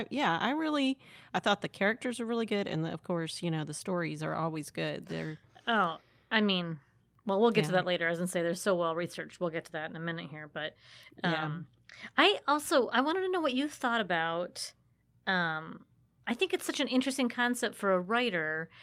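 No audible technical faults.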